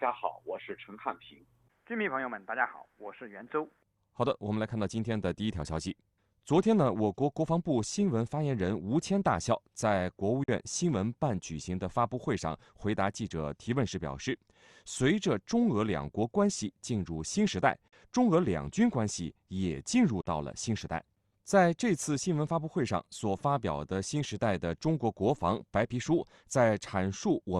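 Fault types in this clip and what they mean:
Bluetooth dropout: At 10.44, 17.88 and 20.21 s the sound cuts to silence for roughly 50 ms each time, which points to about 43 ms of audio, a couple of packets' worth, never reaching the headphones, likely over a wireless link. After each gap the sound picks up further along, as though it had kept playing through the hole, not pausing and resuming where it stopped.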